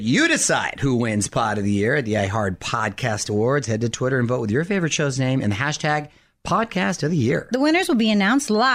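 No technical faults can be heard anywhere in the speech.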